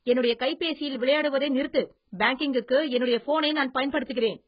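A short speech clip carrying AAC compression damage from start to finish: the sound is dull and smeared, with nothing above about 5.1 kHz, and a watery, warbling texture clings to sustained sounds while sibilants turn fizzy. The heavy damage points to a very low bitrate, around 12 kbps, with AAC-LC the likely codec. On a spectrogram the energy ends at a hard ceiling near 5.1 kHz, and the band beneath it shows blocky holes and patchy noise-like fill.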